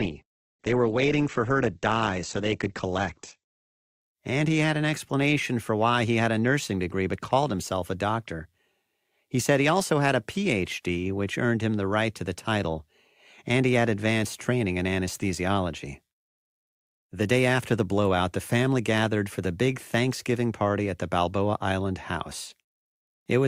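From 0.0 to 4.0 s, the adaptive stream starts at a low bitrate, which fits a 12 kbit/s Opus rendition: nothing above 8.2 kHz, with heavier codec artefacts. It then steps cleanly up to 64 kbit/s without a gap.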